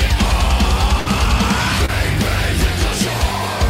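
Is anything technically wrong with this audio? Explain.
Yes, there are two network-related dropouts.

A burst of packet loss runs from 0.99 to 1.08 s. About 60 ms of audio never arrived, and the receiver extended the last sound for roughly 61 ms, fading it down. That stretch is a held, dimming continuation, and the sound resumes a little further on with that portion gone.

A short concealed packet loss occurs from 1.86 to 1.90 s. About 20 ms was missing, and the decoder patched it with around 26 ms of synthesized continuation before blending back into the real signal. It comes across as a brief smear or wobble.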